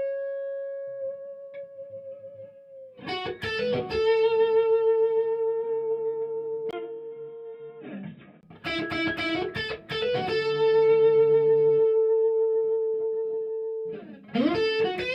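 From 6.71 to 8.43 s the sound turns dull and boxy, with nothing above 3.8 kHz, after a 20 ms gap, likely an input switched to a poorer device. The short silence and a new, faint noise floor far below the signal set it apart from simple filtering.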